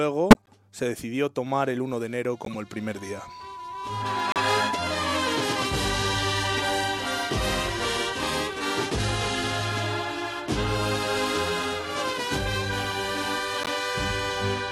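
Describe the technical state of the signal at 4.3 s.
At 4.3 s, a loudspeaker feedback squeal is sounding. It runs from 2.97 to 5.14 s. A microphone is picking up its own loudspeaker, and the loop gain passes one at 991 Hz. That tone swells over about a second to sit roughly 5 dB above the audio.

A corrupt frame decoded as well, from 4.31 to 4.39 s. Damaged compressed data was played anyway, placing energy at wrong frequencies. It is heard as a brief glitch peaking near -10 dBFS. Its length fits about four damaged frames.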